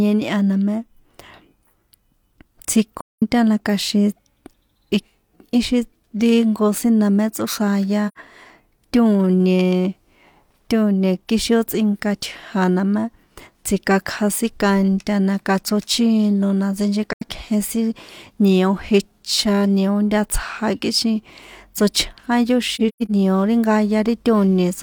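Speech, with AAC frame loss with muting at 2.97, 8.08, 17.13 and 22.75 s. The decoder zeroes the missing spectra, leaving soft-faded silent gaps of about 85 to 213 ms, seen as blank vertical bands on a spectrogram. The last is broken up, with a longest run near 150 ms, just before "nio ri".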